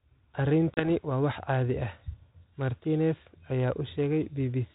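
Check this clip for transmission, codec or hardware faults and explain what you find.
One fault is audible: packet loss on an ADPCM call, on what sounds like a 32 kbit/s G.726 link. Between 0.74 and 0.89 s, about 30 ms of speech drops out into hard-edged silence, roughly a few packets' worth. The decoder's adaptive predictor and step size then no longer match the sender's. The speech comes back with some distortion, and settles within some tens of milliseconds.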